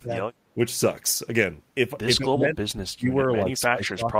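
The speech sinks at 0.0–0.14 s, 0.54–0.58 s, 2.17–2.57 s and from 2.87 s to the end. The drop is around 25 dB at worst in the first and last stretches, slight at 0.54 s and about 10 dB at 2.17 s. This is speech suppressed in double talk, likely an echo canceller turning the talker down while the far side spoke. Unlike packet-loss dropouts, the level is pulled down by the canceller.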